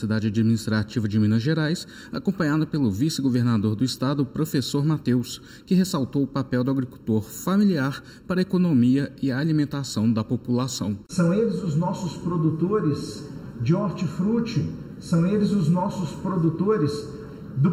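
Channel delay (comb filtering) runs through the whole clip. One channel arrives late by under a millisecond, and the mono sum cancels at evenly spaced frequencies, the first near 700 Hz. The sound stays hollow and phasey, with fixed notches throughout.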